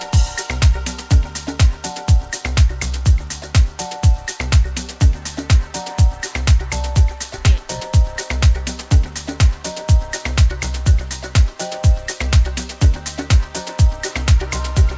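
Nothing is technically wrong with this clip, which came over a G.722 call link and so carries nothing above 8 kHz.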